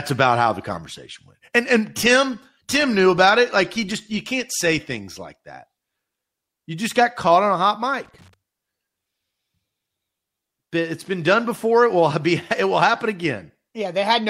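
Speech with loose connector crackle at 2.74–2.85 s and 8.05–8.34 s. A worn contact breaks intermittently, chopping the signal into brief, irregular bursts of scratchy crackle.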